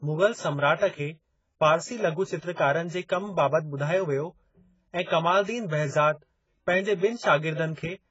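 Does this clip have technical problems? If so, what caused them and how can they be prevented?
Yes. AAC compression runs through the whole clip. Nothing in the speech reaches above 7.6 kHz, and sibilants and sustained vowels carry a fizzy, warbling texture, with a dull, smeared top end. This is likely heavy lossy coding of the AAC-LC kind: starved of bits, the encoder dropped the highest bands and quantised the rest so coarsely that gaps and substitute noise replaced real detail, which fits a bitrate around 16 kbps. Encoding at a higher bitrate, or archiving an uncompressed master before any lossy step, would prevent it.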